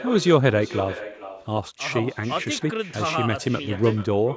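From start to finish, the speech carries an echo with no canceller. At the far end, the call plays through a loudspeaker. The microphone there picks it up, and nothing strips it out. So each phrase returns roughly 0.4 s later, after the network round trip. The copy sits about 15 dB below the speech. It sounds thinner, a faint shadow trailing every phrase. The band stops at 8 kHz, as expected from call microphone processing.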